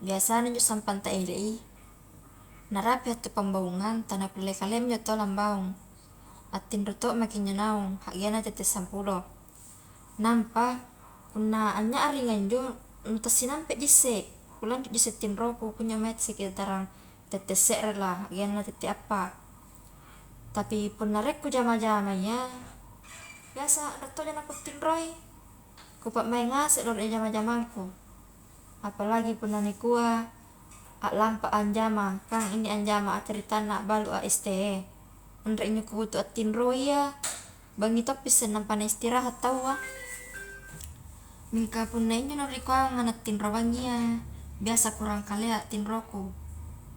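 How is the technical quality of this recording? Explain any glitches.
No glitches can be heard anywhere in the recording: the signal stays continuous and steady, with nothing that points to a technical fault.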